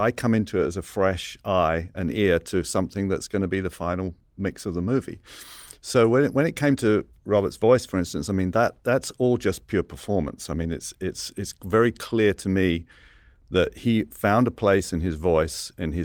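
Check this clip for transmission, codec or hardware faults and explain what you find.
Nothing in the recording points to a fault anywhere along the chain. The speech comes through without any audible disturbance at any point.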